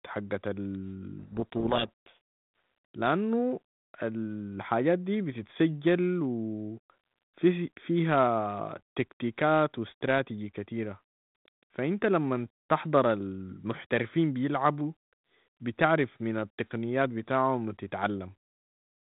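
From 1.19 s to 2.17 s the speech is swamped by harsh, grinding distortion, a codec payload misread. The decoder is reading the G.726 code words with their bits in the wrong order, so each sample's difference value is wrong and the adaptive predictor is driven off course. The speech stays buried under that rasp until the bit order matches again at 2.17 s. The surrounding 32 kbit/s G.726 audio carries only light coding noise and nothing above 4 kHz.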